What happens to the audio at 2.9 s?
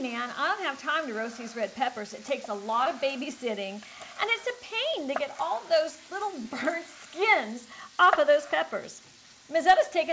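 At 2.84 to 2.87 s there is a short concealed packet loss: about 20 ms of audio failed to reach the decoder in time, and the receiver extrapolated the preceding sound to fill the gap before blending back, leaving a brief smear or wobble.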